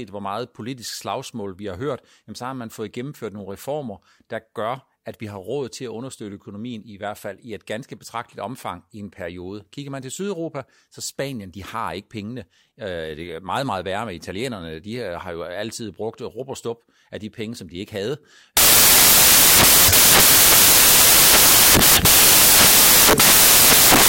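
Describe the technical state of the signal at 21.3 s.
At 21.3 s the speech is buried under samples built from the wrong bytes, a fault that runs from about 18.57 s right through to the end of the clip. The reader is stitching each sample's bytes together wrongly, off by a byte or in swapped order, so the fast-jittering low bits end up driving the big part of every value. What you hear is loud, harsh broadband noise, close to white on the louder sounds.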